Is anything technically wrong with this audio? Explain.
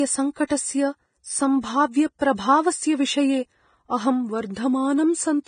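Yes. The whole clip has a hissy, grainy treble, and nothing is present above 9.7 kHz. This is likely heavy Vorbis compression, at a rate that fits roughly 22 kbps. The codec quantises the upper band so coarsely that fine detail turns into noise. Tones sound roughened and attacks blurred.

There is pre-echo from 0.47 to 0.50 s and from 2.19 to 2.21 s. A short hiss runs ahead of a sharp onset for about 29 ms and 22 ms. The codec spread the loud attack's quantisation noise across its whole block, so the attacks sound smeared.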